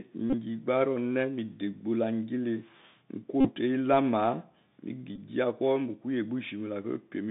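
Across the whole speech clip the sound is boxed into a thin telephone band, roughly 150 Hz to 3.7 kHz, with a granular hiss beneath it, scratchy s sounds, and loud bright passages that crack and distort. This is the Bluetooth CVSD headset codec. The clip fits a 64 kbps CVSD stream, where each sample is coded as a single up-or-down step. When loud high-frequency content changes faster than the adapting step can follow, that step overloads, and the damage is plainly audible.

From 0.30 to 0.34 s a short buzzy rasp breaks through, a rapid mechanical flutter rather than a clean dropout. This is a Bluetooth headset packet repeated. Voice packets were lost, and the chip decoded the previous packet's bits again in place of the missing ones. About 34 ms went missing over a 37.5 ms window, with the longest unbroken run around 30 ms, so the 3.75 ms repetition forms a brief tone near 267 Hz.

The same buzz returns from 3.41 to 3.51 s and is the longest of the three, with about 41 ms of packets replayed as a 267 Hz drone. 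A shorter burst follows from 5.16 to 5.19 s, covering about 19 ms of lost packets, and is heard as a quick grainy buzz before good packets resume.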